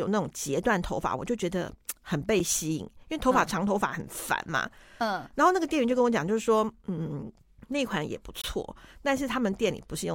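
A gap between stream segments interrupts this speech clip twice, at 2.39 s and again from 8.42 to 8.44 s. At each point the timestamps of two consecutive segments fail to meet, and the player fills the space with silence, inserting holes of about 7.5 ms and 23.1 ms with hard edges. The two holes sit about 6 s apart, which fits 6-second segments. No speech is lost; the silence only adds time between segments.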